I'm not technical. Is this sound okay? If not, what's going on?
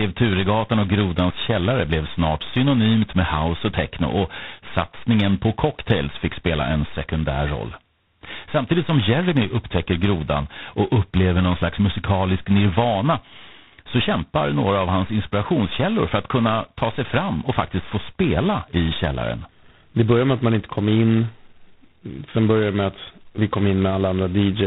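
No. From start to finish the speech has tandem speech coding. The call seems to have crossed several phone networks in a row, each squeezing the voice its own way. That makes it rough and noisy, with nothing above about 3.9 kHz.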